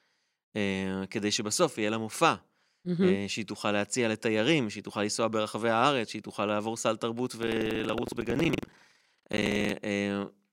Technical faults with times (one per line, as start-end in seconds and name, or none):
7.38-9.71 buffer tearing